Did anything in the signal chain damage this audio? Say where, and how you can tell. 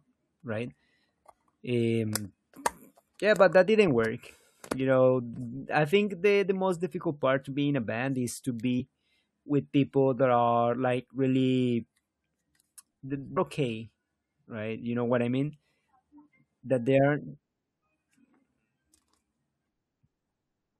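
Yes, damaged data in the compressed stream: two short blips at 8.79 s and 13.36 s, where the decoder hit corrupted frames and briefly lost sync.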